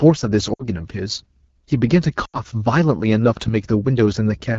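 Right from the start the speech has that rough, raspy AMR wideband (HD Voice) codec sound, which fits one of its lowest rates, around 8.85 kbit/s. Around 0.53 to 0.68 s, then again around 2.25 to 2.39 s, lost AMR speech frames cause the sound to drop to near silence briefly and come back weak.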